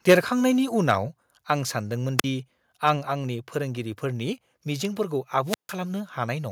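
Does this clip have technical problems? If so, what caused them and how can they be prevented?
Yes. Microphone overload is the likely cause of the problem from 0.09 to 0.15 s. The input volume was set high enough that the peaks drove the converter about 6 dB past its ceiling, so a sizeable share of the waveform in that stretch has its tops sheared flat. That squaring of the peaks adds a harsh, crackly edge to the speech right at the opening. Setting the input gain so the loudest speech peaks stay well below full scale prevents this.

The microphone volume stepped down at 0.13 s, inside that distorted burst. The call software likely detected the clipping and cut the device's input level in a single jump, so the speech and the background drop by about 2 dB at once rather than fading smoothly. The result is an abrupt shift in loudness in the middle of the crackle. Fixing the input level beforehand and turning off automatic microphone gain adjustment prevents this.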